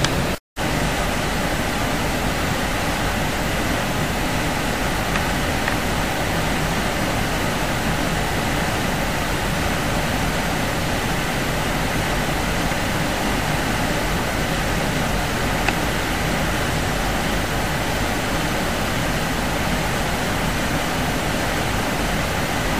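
Low bit depth without dither runs throughout: grainy distortion that tracks the sound, sitting roughly 20 dB below it, likely from truncation to about 6 bits.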